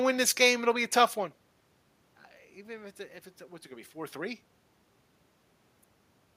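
No technical faults can be heard in this speech, since the room noise in the background and the changes in level around 1 s and 4 s, as the talker moves relative to the microphone, belong to the recording itself.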